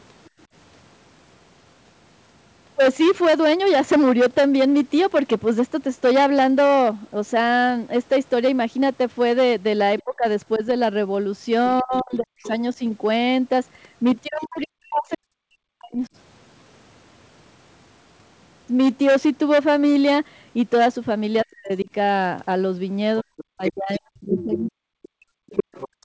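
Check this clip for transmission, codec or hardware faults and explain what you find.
The speech is distorted throughout by clipping, and three stretches show echo-canceller trouble: the far talker leaks in, the near talker is pushed down, and finally the room sound is gated away. The audio stops at 8 kHz, which fits a wideband call codec such as G.722 and is expected.

Hard clipping runs through the whole clip. Loud syllables carry a gritty, buzzing edge because their peaks are sliced flat. The signal was driven about 12 dB beyond what a stage in the chain could pass, so roughly one sample in twenty hits the ceiling. Those squared-off tops create harsh upper harmonics, heard as constant fuzz on stressed sounds rather than occasional crackle.

The other side's voice leaks through in three places. From 9.99 to 12.5 s a second voice sits well under the talker. From 14.41 to 15.16 s it is fainter still. 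From 23.37 s to the end it is nearly as loud as the main speech. The likely cause is a loudspeaker feeding the microphone, with the echo canceller leaving part of that playback in.

Speech is suppressed in double talk during 10.04 to 12.43 s, 14.26 to 16.02 s, and 21.44 to 24.97 s. Within these spans the talker drops out in pieces, falling almost to silence. This adds up to under a second in the first span and about a second and a half in each of the later two. This is likely the echo canceller failing to separate the talker from the overlapping far voice and turning both down.

Background gated by the echo canceller appears from 25.25 s to the end. The room tone falls away by about 38 dB, leaving a dead, empty gap under the leaking far voice. The canceller clamped the microphone hard while the loudspeaker was active, and it had not released that clamp before the audio stops.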